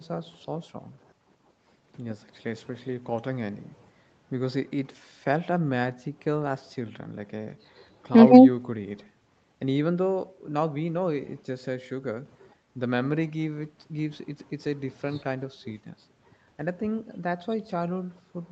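No faults in this speech: the call microphone processing trims the lowest bass as it normally does, and the audio through the WebRTC call path tops out at about 8 kHz.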